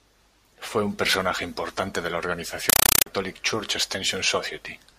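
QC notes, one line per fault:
2.70–3.06 s, compressed stream played as audio after "personaje importante de la": loud static of 5.3 ms noise bursts at 31.25 Hz, fitting undecoded AC-3 frames.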